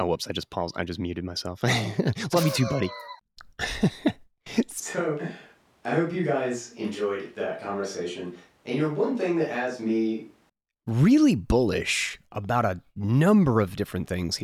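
From 4.80 to 10.49 s, starting just before "really bullish about a", the speech abruptly turns hollow, roomy, bass-light and about 5 dB quieter, likely from a switch to a distant microphone.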